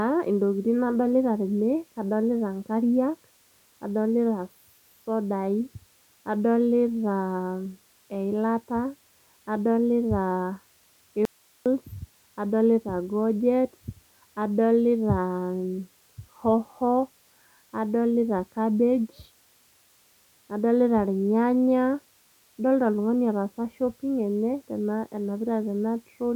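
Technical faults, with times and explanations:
11.25 to 11.66 s, audio dropout to a faint residue: the speech signal was likely lost somewhere upstream for about 0.41 s while the rest of the chain stayed live, so the output kept running with nothing but its own noise floor. The speech cuts out abruptly mid-flow and the gap holds only a thin hiss, roughly 35 dB below the normal level, before the speech snaps back just as suddenly, with no fade at either edge.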